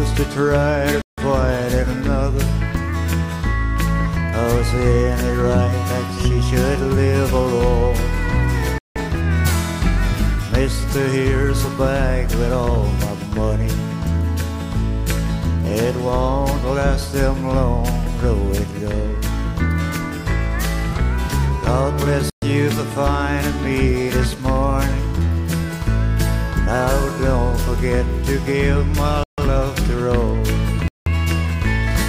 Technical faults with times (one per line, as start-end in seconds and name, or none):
1.02-1.18 Bluetooth stall
8.78-8.96 Bluetooth stall
22.30-22.42 Bluetooth stall
29.23-29.38 Bluetooth stall
30.88-31.07 Bluetooth stall